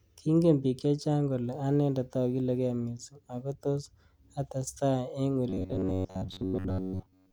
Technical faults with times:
5.49-7.32 robotic sound from repeated short buffers

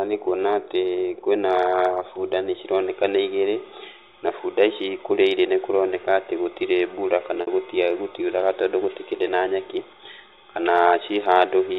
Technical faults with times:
7.41-7.47 packet loss with pitch repetition

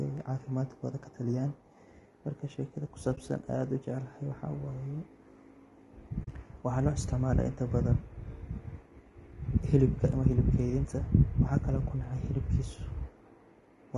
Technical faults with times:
0.00-13.97 low-delay AAC compression
3.15-3.18 AAC frame loss with muting
6.23-6.28 AAC frame loss with muting

